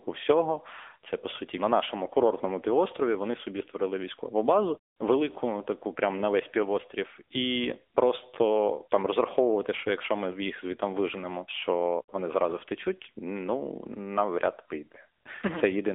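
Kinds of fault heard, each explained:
AMR narrowband mobile codec: speech sounds thin, boxed-in and plainly buzzy throughout, with nothing above 3.7 kHz and little below 300 Hz. A mobile coder rebuilds the voice from a vocal-tract model and sparse pulses. The roughness fits a rate near 8 kbps.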